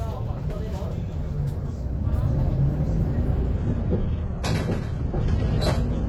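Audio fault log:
3.57–6.09 s: adaptive stream at a lower bitrate. The player switched to a much leaner version of the stream, apparently after the connection slowed, and stayed there to the end. The change fits a move from AAC-LC at around 96 kbit/s to HE-AAC near 16 kbit/s. Nothing remains above 11.8 kHz, so the top turns dull. Quality drops abruptly, with no gap.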